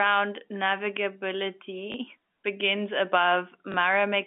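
A small blip interrupts the speech at 1.92 s, and the same thing happens again at 3.72 s. Each is packet loss with the last packet repeated: one 20 ms packet went missing, and the receiver filled the gap by replaying the packet before it. The telephone-band sound, narrowed to roughly 150 Hz to 3.5 kHz and carried by G.711 coding, carries the glitches.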